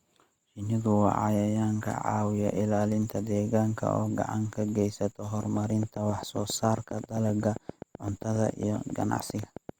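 From 5.43 s to 9.70 s a train of clicks runs under the speech, ticking at a steady 7.5 per second, roughly thirty in all, with peaks around 5 dB above the speech itself. The clicks are alike in shape and evenly spaced, and they carry on through the pauses, so they are most likely interference from nearby equipment or a faulty connection or power supply. That regular, identical ticking separates it from random crackle or an isolated pop.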